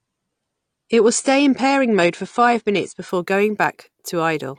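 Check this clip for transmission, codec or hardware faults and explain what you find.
One fault is present: an adaptive stream starting at a low bitrate. From 0 to 3.09 s the speech is dull and smeary, with nothing above 9.7 kHz, then suddenly clears without a gap, consistent with the player switching from about 32 kbit/s to 96 kbit/s AAC once it had measured the connection.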